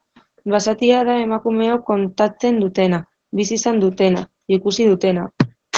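Throughout the speech, the sound is muffled, with nothing above about 8 kHz, and carries a hoarse, faintly robotic edge. This is Opus voice compression in its SILK linear-prediction mode, band-limited to wideband and quantising the excitation coarsely, which fits a low bitrate around 12 kbps.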